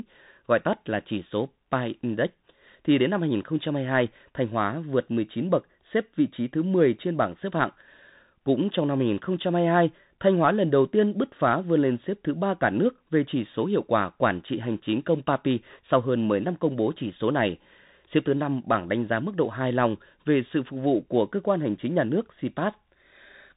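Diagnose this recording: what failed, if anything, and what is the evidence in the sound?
Bluetooth CVSD headset codec, throughout the speech: a codec-stage fault. Nothing above about 3.8 kHz survives, and the damage is plainly audible. Each sample sends one up-or-down bit with an adapting step, which fits a 64 kbps stream. Loud high sounds outrun that step and distort, s sounds turn scratchy, and granular hiss sits under the speech.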